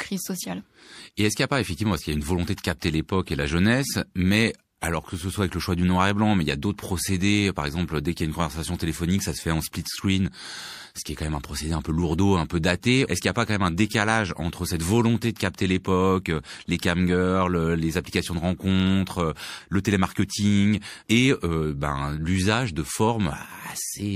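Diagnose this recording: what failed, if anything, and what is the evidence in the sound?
Codec pre-echo after "et la jeunesse mais", 4.81–4.83 s: hiss about 13 dB up before the attack, since the 36 ms block never went short.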